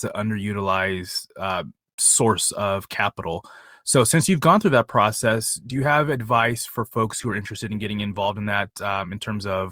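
Right after "you've gone through that", at about 5.30 s, the speech suddenly picks up extra codec artefacts that stay through to the end. That's an adaptive stream at a lower bitrate: the player switched to a leaner version of the stream mid-playback, with no gap at the switch. The extra codec artefacts fit a step down from Opus at 64 kbit/s to 32 kbit/s.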